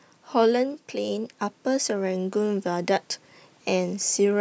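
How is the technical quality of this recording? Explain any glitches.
The recording has one glitch, an automatic gain rise, in call-processed speech with nothing above 8 kHz. From 0.91 to 2.99 s, the gain control judged the input too quiet and raised its level. Voice and background swell together by about 5 dB.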